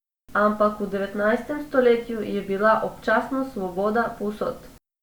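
No technical faults are audible.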